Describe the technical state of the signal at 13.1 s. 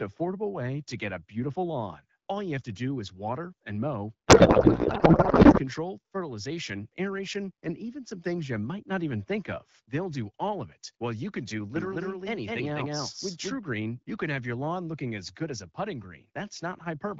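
A doubled audio track spans 11.76 to 13.58 s, after "while you can do". An equally loud copy lags about a fifth of a second, likely from a second capture, with none of an echo's decay.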